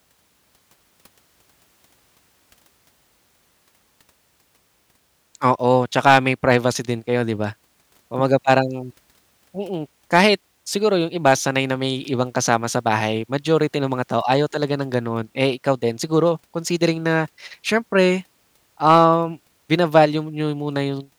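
Harsh crackle breaks up the speech peaks from 6.06 to 6.56 s, then in shorter bursts at 10.15–10.26 s, 11.26–11.33 s and 18.88–19.05 s. This is hard clipping. The peaks overran a stage's limit, by about 6 dB first and about 4 dB later, and were sliced flat, adding high harmonics.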